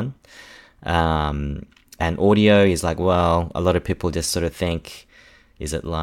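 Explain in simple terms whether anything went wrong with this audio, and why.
Nothing went wrong here: the recording's signal holds steady and intact all the way through, with no audible technical problems anywhere in the speech.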